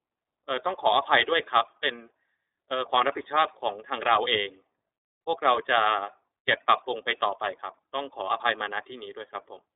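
Speech heard through the iLBC codec for the whole clip, band-limited to roughly 300 Hz to 3.7 kHz with nothing above 4 kHz, and with plainly audible coding damage: a rough, slightly synthetic grain. A plain telephone filter would be muffled but clean. Here each block of sound is coded on its own, and the texture, which fits 30 ms frames at about 13.33 kbps, shows that a low-rate speech codec is at work, not mere filtering.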